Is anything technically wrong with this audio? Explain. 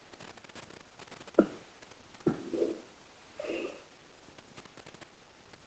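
Yes. There is echo leak at 0 to 0.54 s, 0.84 to 0.98 s, 1.63 to 2.25 s, 2.8 to 3.3 s and 3.83 to 4.49 s. A very faint copy of the speech trails it by 266 ms. The likely cause is a loudspeaker on the other end whose echo canceller sent part of its microphone pickup back.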